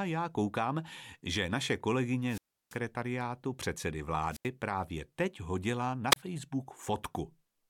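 The analogue radio link fades until the receiver's squelch mutes it, causing a wireless microphone squelch dropout: hiss swells, then near silence lasting 334 ms at 2.25–2.78 s, 85 ms at 4.30–4.48 s and 29 ms at 6.11–6.16 s, before the speech returns.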